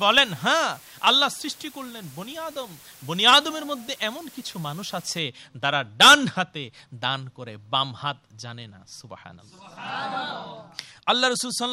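From the very start up to about 5.19 s, you've got low bit depth with dither. The audio is running on just 7 bits, but dither was added before the rounding, so instead of grainy distortion the quantisation error turns into a steady white-noise floor. It comes through as a constant, even hiss sitting about 25 dB under the signal, clean, with no crunch or gating on quiet passages. Past that point the hiss drops away.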